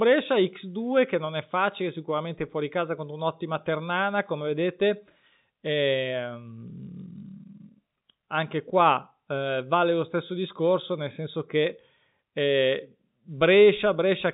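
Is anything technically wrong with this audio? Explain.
No, nothing is technically wrong: the speech comes through intact over what sounds like standard G.711 telephone coding, with its usual ceiling near 3.8 kHz and no audible damage beyond the faint quantisation noise that comes with that format.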